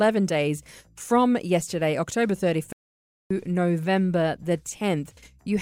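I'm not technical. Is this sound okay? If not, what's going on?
No. The player likely ran short of data, a playback stall: the speech drops to silence from 2.73 s to 3.30 s, then carries on.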